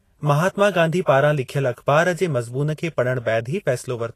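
Throughout the speech, the audio shows plainly audible damage, likely from Vorbis compression at a low bitrate, consistent with roughly 36 kbps. Nothing remains above 14.2 kHz, and the coarsely quantised treble turns fine detail into noise-like hiss and grain, roughening tones and blurring attacks.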